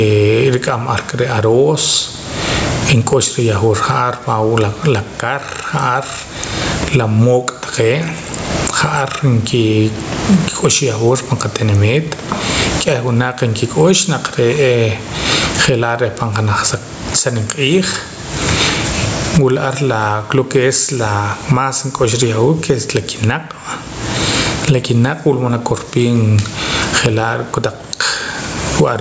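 A speech recording with gain pumping from start to finish. The swing is large, something like 30 dB. Loud and quiet passages sit unnaturally close in level, so the sound feels squashed. The likely cause is input gain set far too high, with a fast limiter or compressor clamping down on each peak. The room noise sits about 34 dB under the speech. The call microphone processing limits the sound to nothing above 8 kHz.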